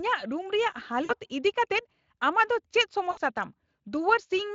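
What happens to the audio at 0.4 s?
At 0.4 s the speech is intact, with no fault at that moment.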